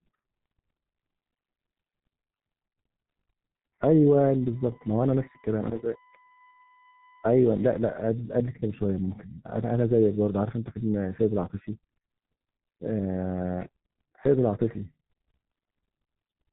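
Throughout the speech, G.723.1 codec damage is heavy: nothing passes above 3.9 kHz, and slow frame updates smear consonants into hoarse mush, unlike a clean band-limit, fitting roughly 6 kbit/s.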